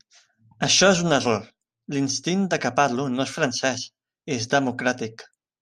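No technical faults occur in the speech, so there is nothing to describe in time order.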